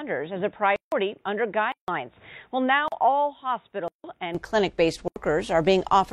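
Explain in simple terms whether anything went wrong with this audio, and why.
For the first 4.35 s the sound is dull and a little quieter, and then it clears with no gap. That points to an input switched to a poorer device, likely a headset or second microphone, rather than a gradual filter.

At 0.76, 1.72, 2.88, 3.88 and 5.08 s the audio drops out abruptly for 40 to 160 ms. These are blocks of digital silence: dead-quiet holes, not fades.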